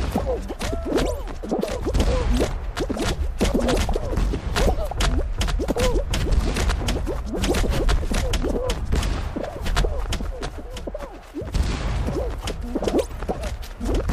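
Nothing here sounds wrong at all: the audio just runs along steadily with no technical faults to point out anywhere in it.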